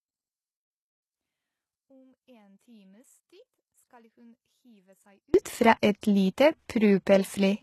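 One channel inverted, from 0.0 to 5.34 s: the speech drops to about 36 dB below its later level, leaving only a faint residue. This is likely one stereo channel with reversed polarity, so the material common to both channels cancelled when they were summed to mono.

HE-AAC compression, throughout: codec damage is plainly audible and nothing reaches above 12.3 kHz. The treble appears to be rebuilt from copied lower bands rather than carried directly, which fits low-bitrate HE-AAC, likely around 16 kbps.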